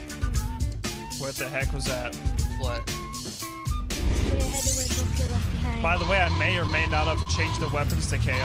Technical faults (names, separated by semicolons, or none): clock drift between sender and receiver; repeated timing corrections; short stall from a late packet